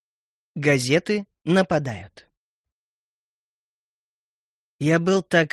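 No technical faults can be heard in this audio.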